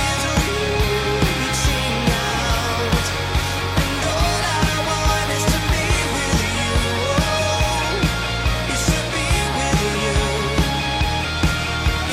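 The audio contains no audible technical faults.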